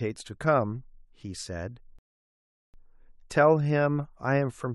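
At 1.99 s the speech drops to silence until 2.74 s, then resumes exactly where it stopped: a rebuffering stall, the player starved of data, adding 0.75 s.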